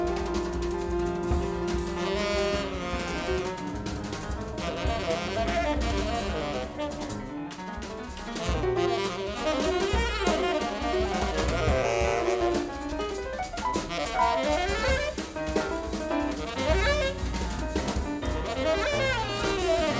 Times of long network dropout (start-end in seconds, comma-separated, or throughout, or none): none